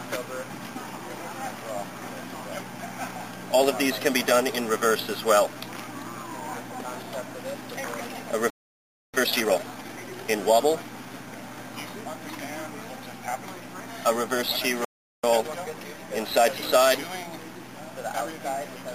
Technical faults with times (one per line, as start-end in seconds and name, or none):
8.50-9.14 playback stall
9.14-10.40 time-compressed catch-up
14.85-15.24 playback stall
15.24-16.00 time-compressed catch-up